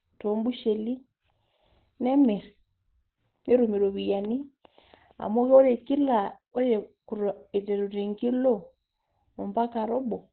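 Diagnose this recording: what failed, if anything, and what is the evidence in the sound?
The failure is at the codec stage, throughout the speech. Nothing sounds above about 4.4 kHz, so the voice is muffled and hoarse. This is likely Opus compression in its narrowband speech mode, heavily damaged, which fits a bitrate near 12 kbps.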